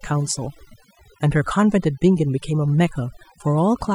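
Overdone noise removal runs through the whole clip. The noise reducer was set so aggressively that bands near its noise estimate are pulled down or muted, taking quiet speech detail with them. Gaps fall to near silence with twinkling specks.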